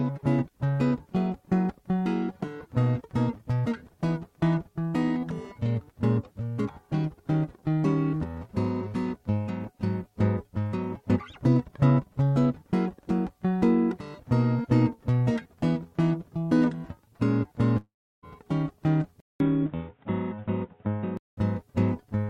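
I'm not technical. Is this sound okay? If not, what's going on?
No. At about 17.77 seconds there is likely a long network dropout: the music stopped arriving, so the player stretched the last sound into a fading buzz, then went quiet for about a third of a second. When the music returns at 18.25 seconds, nearly half a second of it is simply missing.

At 19.20 seconds the recording likely had its input switched to a poorer device. You hear a brief gap of about 0.2 seconds, then until 21.37 seconds the music sounds dull and boxy, with nothing above 3.8 kHz and a faint new background hiss, though the loudness stays about the same.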